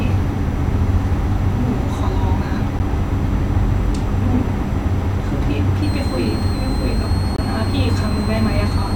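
A block of digital silence hits at 2.79 s, and a second, longer one runs from 7.36 to 7.38 s. In both, the speech drops abruptly to silence and returns with no fade, as if the output buffer was not filled in time. The first gap lasts about 11 ms, which fits a 512-sample buffer, and comes across as a tick or dip. The second, about 21 ms and fitting 1024 samples, is a brief hole.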